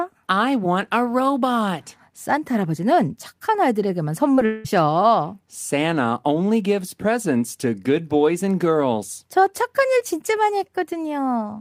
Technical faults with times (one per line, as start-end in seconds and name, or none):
4.35-4.39 short concealed packet loss
4.45-4.66 long network dropout